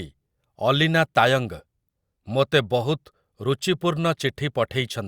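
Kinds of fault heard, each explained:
No faults detected in the speech recording.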